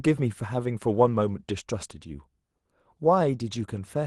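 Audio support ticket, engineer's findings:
No faults found in this speech.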